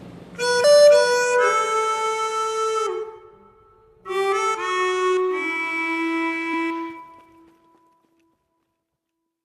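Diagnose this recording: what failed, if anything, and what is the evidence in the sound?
Damaged data in a compressed stream at 0.63, 3.02 and 6.53 s: three brief blips of under 20 ms each. This is a codec-stage fault. Corrupted bytes make the decoder misread frames, lose sync and hunt for the next valid frame header.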